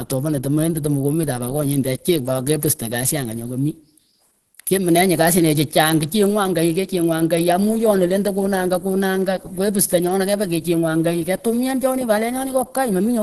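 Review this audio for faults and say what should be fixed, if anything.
Throughout the speech, nothing sounds above 12.1 kHz. The voice is hoarse, grainy and plainly damaged. This is likely Opus compression in its hybrid speech mode, which narrows the band and fills detail coarsely at a low rate near 16 kbps. Encode at a higher bitrate, or keep an uncompressed copy.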